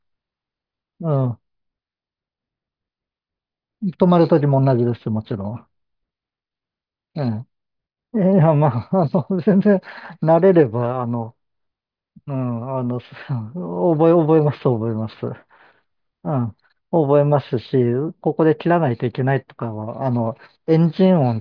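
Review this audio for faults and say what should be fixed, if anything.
No faults; nothing needs fixing.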